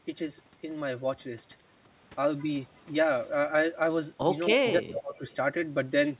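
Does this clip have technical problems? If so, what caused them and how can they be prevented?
Yes. From 4.55 to 5.21 s there is speech suppressed in double talk. The voice dips by roughly 20 dB for about half a second, likely because the echo canceller turned down both sides while they overlapped. Better echo cancellation with proper double-talk detection, or a headset, prevents this.

From 4.68 to 5.36 s there is an echo leak. A delayed copy of the voice returns 270 ms later, about 10 dB below the speech, likely from a loudspeaker whose echo canceller let some pickup through. Its distinct, late repeat sets it apart from room reverberation. Using headphones or lowering loudspeaker volume on the loudspeaker side prevents it.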